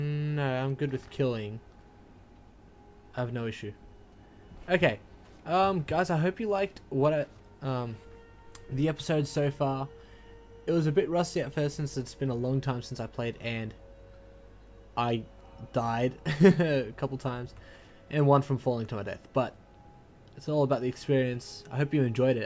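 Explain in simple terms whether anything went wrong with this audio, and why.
Nothing went wrong here; no faults can be heard.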